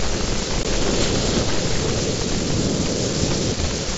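A speech clip with one dropout at about 0.63 s, and it's unconcealed Bluetooth headset packet loss. Roughly 15 ms of audio between headset and phone never arrived, which fits a couple of lost packets, and nothing was patched in, so you get a tiny hole with hard edges. The link is the mSBC wideband headset codec, and it adds a light graininess on louder syllables.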